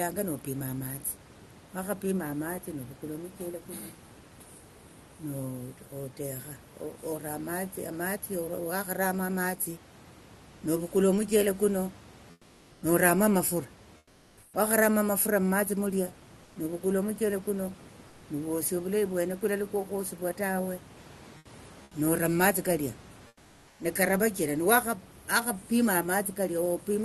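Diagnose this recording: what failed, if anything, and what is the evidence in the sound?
In pauses at 12.31–12.81, 13.97–14.53, 16.43–16.55, 18.07–18.21, 21.37–21.45, 21.83–21.91 and 23.27–23.79 s, the room background turns flat and featureless, about 2–5 dB quieter. This is comfort noise in place of the background, likely from Opus DTX in the call codec.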